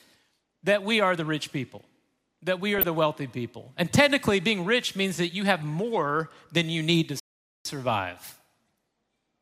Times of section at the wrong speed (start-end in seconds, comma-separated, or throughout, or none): none